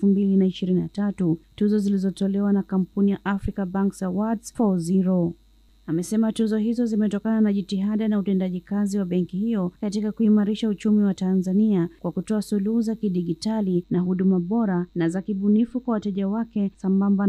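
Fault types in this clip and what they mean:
Channel delay (comb filtering): from 13.83 s to the end, one channel arrives very slightly late, roughly 0.05 ms, which fits a lag of about two samples. Summed to mono, it cuts evenly spaced notches starting near 10 kHz, so the top turns dull.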